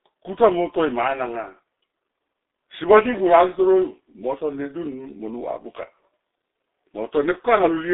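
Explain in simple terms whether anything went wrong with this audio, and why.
Something did go wrong, and it runs through the whole recording. The speech has been squeezed through the G.723.1 codec, an old internet-phone format that packs sound very tightly. It keeps only a narrow phone-style band, roughly 300 Hz to 3.7 kHz, with nothing above about 3.8 kHz. It also rebuilds the voice in coarse chunks. So it sounds muffled and hoarse, and sharp sounds like s and t come out smeared.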